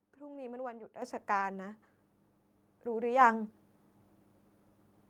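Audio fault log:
0.33 s, lost packet rebuilt from error correction: a brief 20 ms patch of rougher, noisier speech with no gap. A single packet went missing, and the decoder filled the hole with the low-bitrate backup copy carried in the next packet, so the sound continues at reduced quality.
1.02 s, microphone volume stepped up: speech and background noise jump abruptly together by about 9 dB. The call software judged the microphone too quiet and raised the device's input volume in one step.
1.33–1.43 s, lost packet rebuilt from error correction: a longer, coarser and noisier stretch of about 60 ms, still with no dropout, which fits three lost packets. Each was replaced by the reduced-quality copy that the following packet carried.
3.21 s, microphone volume stepped up: a second, smaller jump of about 4 dB in both speech and background. The software again raised the microphone input volume in a single step.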